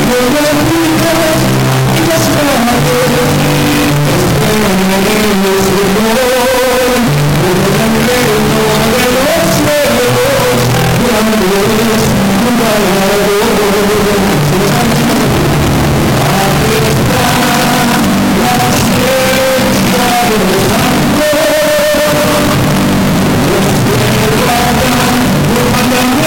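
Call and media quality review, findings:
Entire clip: very loud, harsh, near-square waveform at an almost fixed, high level; background noise as loud as the main sound; pitch still traceable. Likely float read as integer: 32-bit float samples interpreted as 32-bit integers, so sign and exponent bits dominate the level.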